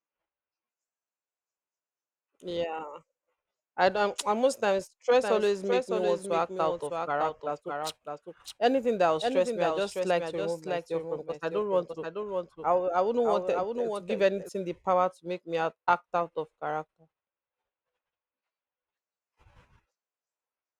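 From 5.23 s to 14.49 s, the speech carries a doubled audio track. A second copy of the same speech runs about 0.7 s behind the original, roughly 5 dB quieter. It covers the full frequency range and has no tail or room sound. It cuts in abruptly and drops out just as suddenly. The likely cause is the same signal reaching the mix twice, once through a slower path.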